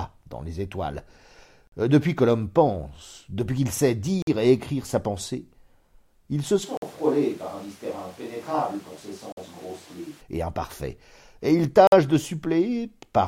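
French speech with gaps between chunks: 50 ms silences at 1.67, 4.22 (after "pense depuis qu'il sait"), 6.77, 9.32 and 11.87 s, one per 2.5 s chunk, visible as hard-edged blank columns in the waveform and spectrogram. From 6.65 to 10.20 s, between "il se" and "et imparfaits et il", the sound turns hollow and roomy, about 5 dB quieter, with room noise roughly 25 dB below the speech. This is likely a switch to a distant microphone, showing as thinner low frequencies and a raised noise floor on the spectrogram.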